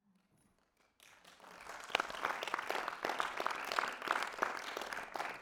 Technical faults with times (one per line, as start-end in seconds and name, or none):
1.58 dropped buffer (overrun)
2.52 dropped buffer (overrun)
3.42 dropped buffer (overrun)
4.46 dropped buffer (overrun)